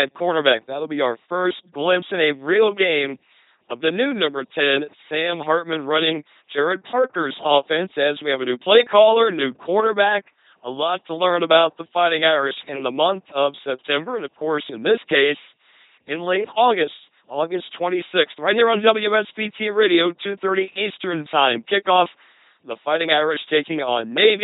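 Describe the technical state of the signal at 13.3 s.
At 13.3 s the speech is still under the LPC-10 vocoder that spans the whole clip. Each frame is rebuilt through a short all-pole filter excited by either a pulse train or noise, giving a buzzy, robotic voice with nothing above 3.9 kHz, consistent with a 2.4 kbit/s stream.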